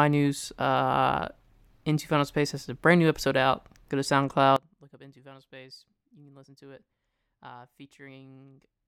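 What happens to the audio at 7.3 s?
One channel inverted, from 4.56 s to the end: the speech drops by about 22 dB and nearly vanishes, likely because reversed polarity cancels the shared centre when summed to mono.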